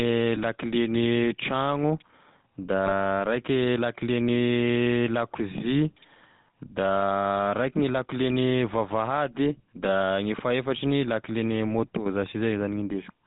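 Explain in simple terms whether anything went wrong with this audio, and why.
The whole recording went through the old GSM full-rate codec, so the speech sounds buzzy and gravelly, with nothing above 4 kHz. There are also GSM bit errors at 0.36 to 0.38 s and 2.86 to 2.92 s, where corrupted data briefly turns the speech into a squawky, gargling burst.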